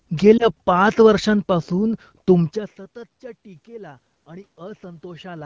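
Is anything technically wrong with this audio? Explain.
Yes, there are two things worth flagging.

From 0.38 to 0.49 s there are lost AMR speech frames. It sounds like a single dropped frame, about 20 ms of missing audio. The radio link corrupted that frame, so the wideband decoder filled the hole by reusing the last good pitch and vocal tract settings at reduced gain. You hear a quick dip or warble, then the voice comes back a touch weak or rough for a moment before settling.

From 3.65 to 5.41 s you can hear the automatic gain rising. The level at the mic had dropped by about 24 dB, which fits the talker drifting away from the microphone around 2.5 s. The gain control responded by gradually pushing its gain up by about 7 dB. Because it boosts everything together, the voice and the room noise swell up together over nearly two seconds rather than jumping.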